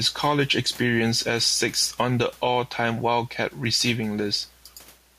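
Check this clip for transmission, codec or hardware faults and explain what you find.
One fault runs through the whole speech clip: gain pumping. The room noise sits about 33 dB below the speech, and the gain swings by roughly 5 dB. The likely cause is input gain set far too high, with a fast limiter or compressor pulling the level down on every peak and releasing it in the gaps. Loud and quiet passages sit closer together, and the speech sounds squashed.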